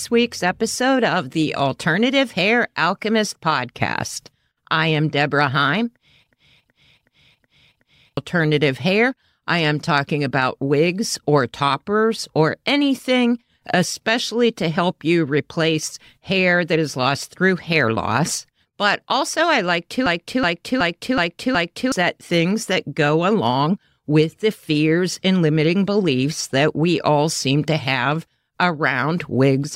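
At 6.32 to 8.17 s and again at 20.06 to 21.92 s, a system hang loop replays one 0.37 s fragment of speech five times, a stutter at 2.69 Hz that fits a 16384-sample buffer. Roughly two seconds go missing each time. The waveform and spectrogram show identical blocks repeating.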